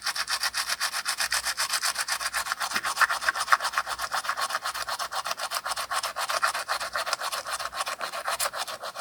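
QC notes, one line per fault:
No faults found across the clip's sound; nothing to log.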